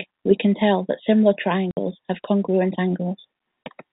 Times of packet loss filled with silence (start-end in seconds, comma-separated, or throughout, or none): 1.71-1.77, 3.66